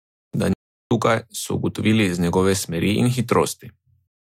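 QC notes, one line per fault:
0.53–0.91 s, playback stall: the speech just drops out mid-flow for about 377 ms, dead silence rather than a fade, then picks back up right at "tukaj so ugotovili" as if nothing happened. It sounds like the player itself froze. Most likely it ran dry of buffered data or its thread got held up, and output resumed once it caught up.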